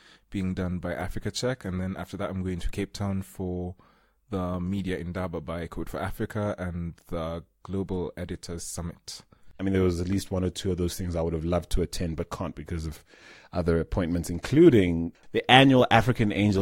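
There are no technical faults to describe in this speech recording.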